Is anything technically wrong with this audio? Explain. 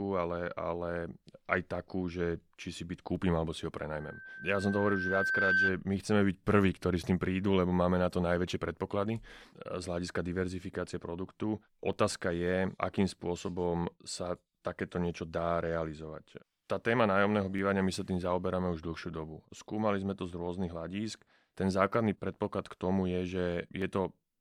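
Yes, the speech carries two kinds of technical fault.

Loudspeaker feedback squeal runs from 4.00 to 5.79 s. A microphone is hearing the loudspeaker it drives, and at 1.6 kHz the round trip returns more energy than it sends, so that one frequency feeds on itself. It swells over about a second and a half into a steady whistling tone that ends up a few decibels louder than the speech before it cuts off.

Dropped samples produce sharp single clicks at 3.16, 4.20, 10.09, 11.93, 17.59, 19.58, 21.10 and 23.82 s, one of them landing inside the squeal. Each is most likely a gap of under a millisecond in the sample stream, so the waveform jumps abruptly to a later value. Far too brief to remove anything audible, each jump is heard as a tick, a thin vertical line across the spectrum.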